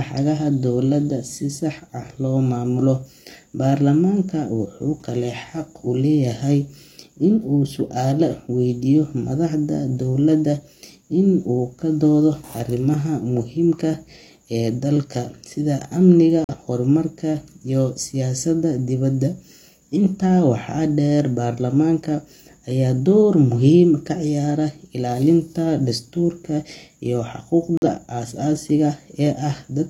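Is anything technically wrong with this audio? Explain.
Yes. The speech has two corrupt frame muted faults: a gap from 16.44 to 16.55 s, and another from 27.77 to 27.86 s, just after "dastuurka iyo". In each, a damaged compressed frame was rejected by the decoder and replaced with silence, so the sound cuts off abruptly to a hole about one frame long. Unlike a dropout that loses time, the speech resumes exactly on schedule, and the hole is true silence rather than a concealed smear.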